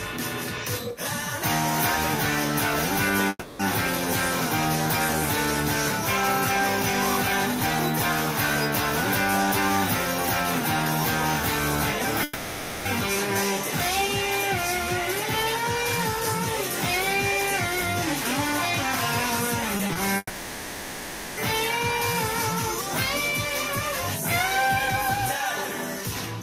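From 3.29 to 3.61 s, a long network dropout likely cut off arriving audio. The receiver stretches the last sound into a fading buzz for about 300 ms, ending in a brief silence before the audio resumes with that stretch lost.

From 12.23 to 12.87 s, a second long network dropout likely stopped the audio again. About 620 ms is replaced by a continued, decaying imitation of the preceding sound, with no gap of silence.

At 19.77, 19.87 and 19.93 s, short concealed packet loss left the decoder missing about 20 ms each time. It patches each hole by extending the previous sound, producing three quick smears or wobbles close together.

From 20.17 to 21.39 s, the longest network dropout likely interrupted delivery for about 1.2 s. The fill decays from a buzz into near silence, then the audio jumps back without the missing portion.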